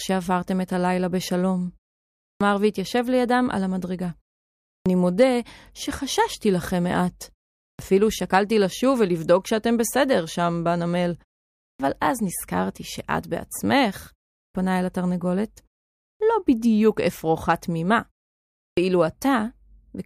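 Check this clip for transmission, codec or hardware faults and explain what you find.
Seven times the speech bursts out of silence with its opening sounds missing, at 2.30, 4.76, 7.69, 11.69, 14.44, 16.10 and 18.68 s. This is clipped start after a pause. After gaps of 0.37 to 0.65 s, the output device sleeps and loses 94 to 106 ms while waking again.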